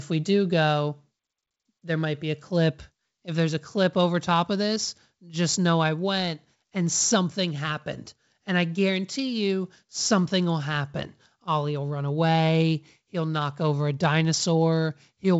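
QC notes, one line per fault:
No faults heard in this speech clip.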